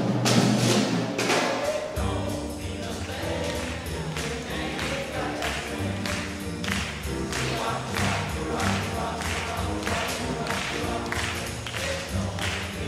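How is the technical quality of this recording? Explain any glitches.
The recording has one fault, present throughout. Sample clock jitter: the converter's clock wanders by around 3 microseconds, so samples land early or late. Errors sit about 30 dB below the signal. They come out as a hiss that follows loud, bright passages and disappears in silence.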